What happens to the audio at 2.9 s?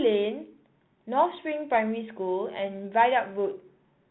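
At 2.9 s you're hearing the Bluetooth CVSD headset codec, and it's not a local event: it runs through the whole clip. CVSD sends just one bit per sample saying up or down, with a step size that adapts, which fits a 64 kbit/s headset link. Nothing above 4 kHz survives, so the speech is boxed in and dull, with a grainy hiss underneath, scratchy s sounds, and distortion where loud highs outrun the step.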